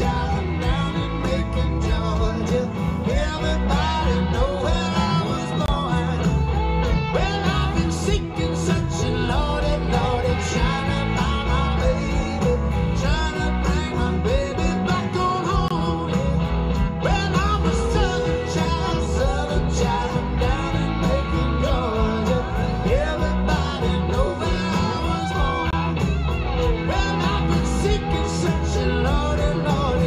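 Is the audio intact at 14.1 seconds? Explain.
Yes, the audio at 14.1 seconds is intact, with no dropout, click, distortion or other fault to be heard at that moment.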